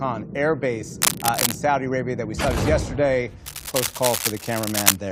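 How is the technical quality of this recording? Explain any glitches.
Two bursts of cable scratch noise spoil the recording. They run from 1.00 to 1.55 s and from 3.45 to 4.96 s. Each is a dense, uneven scratching, about as loud as the sound itself. A worn cable or connector being moved is the likely cause.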